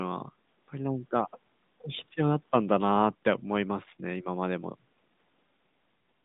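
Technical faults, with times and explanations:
Throughout, AMR narrowband mobile codec: the speech sits in a telephone band of roughly 150 Hz to 3.7 kHz, with nothing above 3.8 kHz, so sibilants and breath lose their top. The codec rebuilds the voice from a vocal-tract filter excited by a few pulses per 5 ms subframe, which gives the plainly audible buzzy, synthetic edge heard here. The degree of damage fits a mid-rate mode around 10 kbps.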